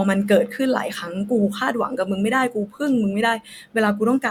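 No technical faults can be heard anywhere in the speech. There is nothing to place on a timeline.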